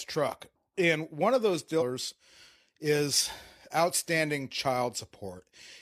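At 1.77 to 1.82 s, just after "one of those", damaged data in the compressed stream throws the decoder out of sync, producing a brief glitch.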